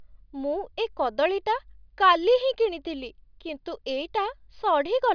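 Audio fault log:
Nothing in this speech recording stood out as a fault on listening.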